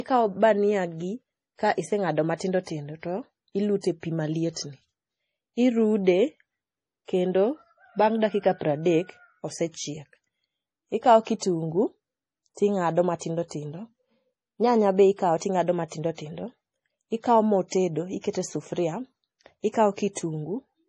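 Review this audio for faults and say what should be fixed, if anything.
The speech has nothing above 11.2 kHz for the whole clip, with the smeared, swirly texture of heavy compression. This is likely low-bitrate audio saved at a high bitrate: a cheap MP3 pass, around 32 kbit/s, re-encoded at something like 256 kbit/s, which restores none of the lost detail. A spectrogram shows a flat ceiling at 11.2 kHz and blotchy, patchy upper bands. Prevent it by encoding once from the original uncompressed source at the final bitrate.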